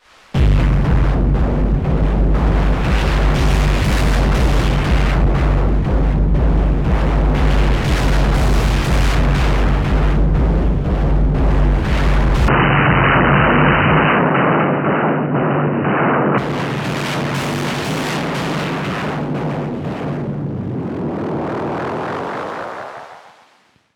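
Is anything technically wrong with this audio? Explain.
Yes. From 12.48 to 16.38 s the sound goes dull and boxy, with nothing above 3 kHz, a faint new noise floor well below the signal, and no gap or level jump. That's most likely an input switched to a poorer device, then back.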